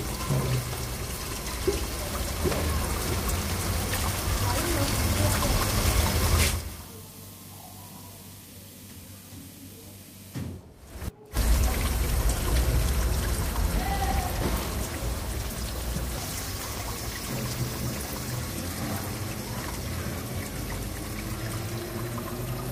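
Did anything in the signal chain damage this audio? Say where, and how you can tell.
Yes. The damage sits in the call path, at the codec stage. From 14.84 s to 18.51 s the audio turns coarse and watery, and the top end goes dull. This is a call bitrate drop. The bandwidth estimate fell, so the encoder was told to spend far fewer bits. The rate held at its floor for about 3.6 s. The sound points to a fall from around 64 kbps to roughly 20 kbps.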